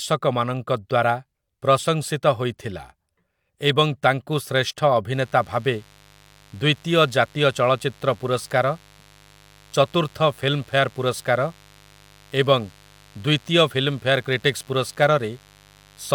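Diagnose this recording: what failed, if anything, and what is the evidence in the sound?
Mains buzz enters in the analogue wiring from 5.12 s. Raspy 50 Hz switching spikes sit roughly 30 dB below the speech, forming a spectrogram comb of harmonics into kilohertz.

Overlap between stream segments at the network or playback stage: at 14.61 s, 10 ms is trimmed at a 4 s segment boundary, heard as a tiny skip and seen as a waveform jump.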